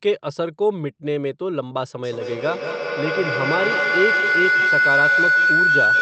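At 2.03 s a feedback howl begins and runs to the end of the clip. A microphone-to-loudspeaker loop is adding gain on each pass, so the repeats grow rather than decay and narrow into a tone near 1.5 kHz, with the repeats roughly a fifth of a second apart, the loop's round-trip delay. At its peak the howl sits about 5 dB above the speech. The call path beneath it is band-limited to 8 kHz, consistent with Opus at around 32 kbps.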